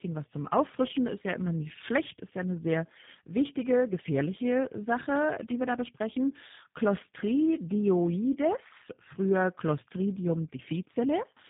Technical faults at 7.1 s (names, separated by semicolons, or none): tandem speech coding